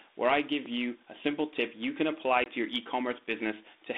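Packet loss on an ADPCM call occurs at 2.44 to 2.5 s, right after "tip you can apply" and before "your e". About 20 ms of audio, roughly one packet, drops out as a hard-edged silent gap. Because the G.726 decoder's adaptive predictor and step size kept no record of the missing stretch, they no longer match the sender's, so the sound resumes briefly rough before resettling within some tens of milliseconds. The 32 kbit/s stream stays within its 250 Hz to 3.7 kHz telephone band.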